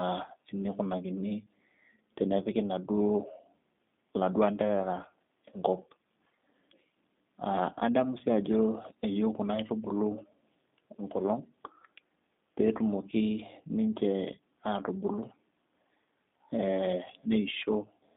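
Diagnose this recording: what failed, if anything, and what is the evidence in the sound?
The failure is at the codec stage: G.729 coding runs throughout. The speech is band-limited to roughly 200 Hz–3.7 kHz and sounds rough and synthetic, which fits an 8 kbit/s G.729A stream rebuilding each frame from a vocal tract filter, pitch predictor and sparse pulses.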